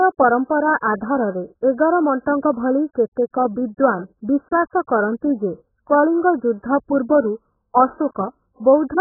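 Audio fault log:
Throughout, AAC compression: the speech sounds dull and smeared, with nothing above 1.8 kHz and a warbling, fizzy texture on sustained sounds and sibilants. The likely cause is heavy AAC-LC coding at a very low bitrate, around 8 kbps, which forces a low cut-off and coarse quantisation.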